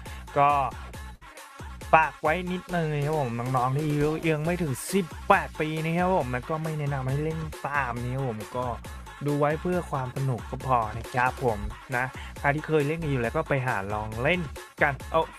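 At 1.15 s a burst of packet loss drops about 60 ms. The receiver stretches the last sound into a fading 57 ms fill, then jumps ahead at 1.23 s.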